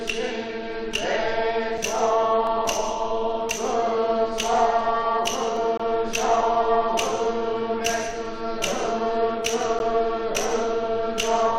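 Right at 1.78 s there's a brief hard-edged hole in the sound, only about 4 ms, and that's a gap between stream segments: two chunks don't quite butt up against each other in time, so the player pads the space with silence. Nothing's actually missing, it just stalls for an instant. The same thing comes back at 5.77 to 5.80 s, a longer 22 ms dropout, and again at 9.79 s for about 11 ms. They land roughly four seconds apart, which fits the joins of 2-second segments.

In between, you get three single sharp clicks at 2.47, 5.57 and 8.10 s, each showing as a thin vertical line in the spectrum. These are likely dropped samples: a tiny fraction of a millisecond goes missing, so the waveform jumps straight to a later value. Far too short to lose any sound, but the sudden step pops.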